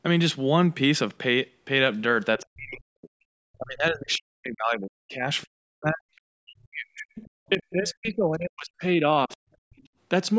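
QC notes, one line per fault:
2.39–9.38 s, speech suppressed in double talk: the speech repeatedly dips and cuts out in pieces across this span, around five seconds of it in total, with the deepest drops reaching roughly 40 dB down. The likely cause is an echo canceller that could not separate the near talker from loudspeaker echo while both sides spoke at once, so it turned everything down together. The sound stays band-limited to 8 kHz throughout, with the lowest bass trimmed, as the call's microphone processing would leave it.
2.41–2.46 s, 4.11–4.15 s, 5.41–5.45 s, 6.16–6.21 s, 7.15–7.72 s and 9.31–9.88 s, other side's voice leaking through: a second, faint voice surfaces in brief scraps, most of them only a few hundredths of a second long. The two longer stretches, near 7.2 s and 9.3 s, last over half a second each. This is likely far-end audio from the loudspeaker that the echo canceller failed to remove. 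It sits roughly 20 to 40 dB below the main speech and is loudest around 7.2 s.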